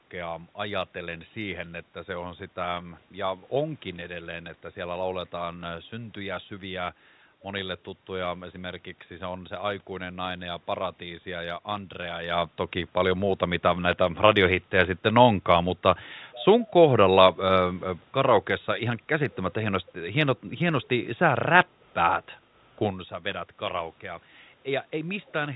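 Nothing stood out on listening to this speech, which carries the narrow band of a fixed-line telephone call, some background noise from the room, and a couple of shifts in level around 12 and 23 seconds as the talker moves relative to the microphone.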